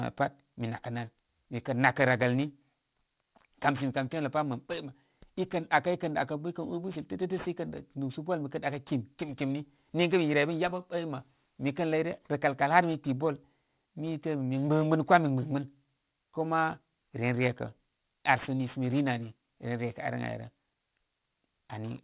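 Throughout the clip, sibilants and other bright consonants sound gritty and metallic, and the spectrum stays full right up to a hard edge at 4 kHz. This is aliasing. The speech appears to have been downsampled, which fits a conversion to 8 kHz, without a low-pass filter first. Energy above 4 kHz folded back below it as unrelated tones, sitting roughly 20 dB under the speech.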